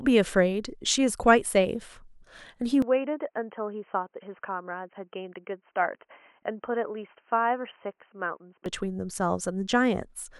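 Input switched to a poorer device from 2.82 s to 8.66 s: the speech turns boxy and dull, with nothing above 3.1 kHz, drops around 5 dB and gains a faint new noise floor. No gap marks either switch, likely a change to a narrowband headset or microphone.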